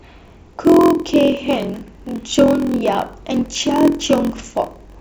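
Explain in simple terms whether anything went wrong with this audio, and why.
Something did go wrong, and it lasts the whole clip: a block size mismatch (padded). One step in the chain hands over audio in pieces slightly too short for the next step, which fills each gap with silence. Those tiny gaps repeat about 43 times a second, giving a steady low buzz under the speech, and the speech runs at about 0.94 times normal speed. Unlike a simply slowed recording, the character of the voice stays the same. The buzz rate fits blocks of 1024 samples.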